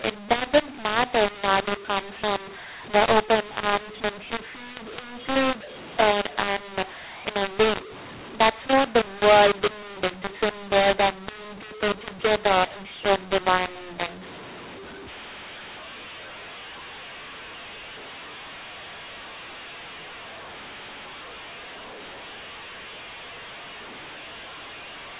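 From the first moment to the end, this speech has the classic mu-law and A-law mix-up. The samples were written as A-law but decoded as if they were mu-law, so the logarithmic level mapping is wrong and loudness comes out scrambled. Some peaks swell, some sag, and the quietest parts get pushed well up, which is why the pauses hiss instead of going silent. The voice sounds harsh and gritty throughout, over a normal telephone band that stops at 4 kHz.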